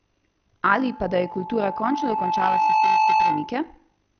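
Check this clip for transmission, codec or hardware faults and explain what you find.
Three faults are present in this speech clip: two run through the whole recording and one occurs partway through.

From start to finish the audio is dull, and it carries a gurgling, granular roughness. The likely cause is MP2 compression at a low bitrate, perhaps around 48 kbps. Starved of bits, the encoder shuts off the upper sub-bands and coarsely quantises the rest. The granular gurgle distinguishes it from plain low-pass filtering.

Also throughout, overlap-add ripple makes the level rise and fall by about 6 dB, around 50 times a second. The frames were recombined with windows that don't sum to constant gain, so every frame boundary leaves a dip or bump. The result is a buzzy, rough tremolo, locked to one steady rate, rather than a wandering warble.

From 0.75 s to 3.70 s, a loudspeaker feedback squeal at 870 Hz swells over roughly two seconds until it sits about 5 dB above the speech. 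At that frequency the microphone-loudspeaker loop gain exceeds one, so the tone feeds itself. A steady hum would hold its level, but this tone grows on its own.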